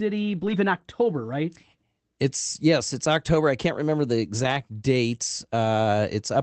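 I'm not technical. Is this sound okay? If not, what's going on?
No. Twice, at 0.37 to 0.51 s and at 4.43 to 4.53 s (just after "I can't remember the"), the speech briefly turns rough and noisy. This is a lost packet rebuilt from error correction: pieces of the call went missing, and backup copies filled the gaps.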